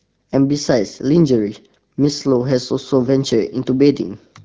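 Nothing goes wrong anywhere in this speech clip; it simply carries the top-limited sound of an AMR wideband (HD Voice) call, which fits a rate of about 12.65 kbit/s.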